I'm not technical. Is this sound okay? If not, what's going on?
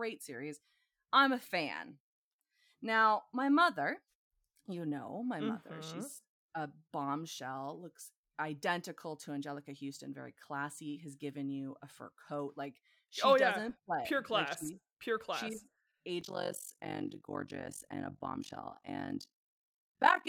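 No. From 16.21 s to the end, the speech takes on a rough, robotic flutter: overlap-add ripple. The sound was chopped into short overlapping slices and rejoined unevenly, so loudness pulses about fifty times a second. Unlike a steady hum, the voice itself throbs.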